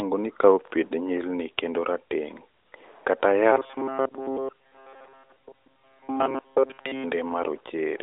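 From 3.52 to 7.04 s the speech turns into a rigid, metallic buzz fixed at 134 Hz. This is robotic sound from repeated short buffers: new audio likely arrived too seldom, so a slice of about 7.5 ms was looped in place of most of the real speech.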